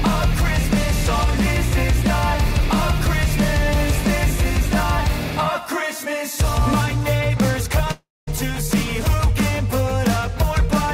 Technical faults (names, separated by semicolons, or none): long network dropout